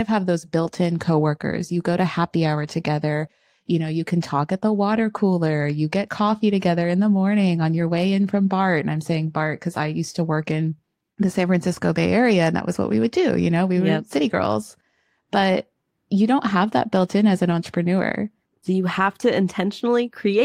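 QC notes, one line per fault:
No faults found in this speech clip.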